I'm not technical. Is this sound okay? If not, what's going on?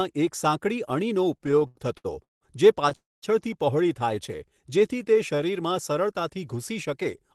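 No, there are three problems typical of an internet call.

From 1.37 to 2.43 s there are repeated stalls (stutter): the sound catches ten times in quick succession, each hold lasting up to 0.17 s. The data kept arriving late, so playback kept pausing and stretching the last sound. Unlike a single freeze, it's a choppy series of small hitches.

From 2.95 to 3.24 s there is one call audio freeze. The sound stops for about 0.27 s, most of it silence, then resumes where it left off with nothing lost. The likely cause is data held up on the network. It is one clean gap, not a stutter.

From 4.15 to 5.41 s there is a jitter buffer slow-down. The sound plays at about 91% speed, stretched by roughly an eighth of a second while the pitch stays the same. The call software was quietly building a reserve. It drags smoothly instead of stopping.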